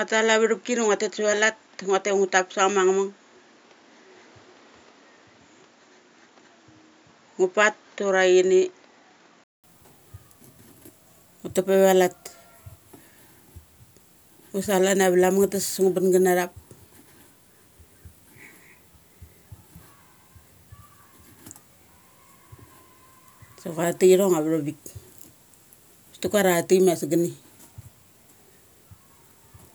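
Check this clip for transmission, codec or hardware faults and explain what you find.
One fault is present. From 0 to 9.64 s the speech sounds dull and boxy, cut off above 7.2 kHz, with background noise about 35 dB down. A 200 ms silence then gives way to fuller sound at the same level. The likely cause is an input switched to a poorer device, whose narrower band and added noise end when recording returns to the better device.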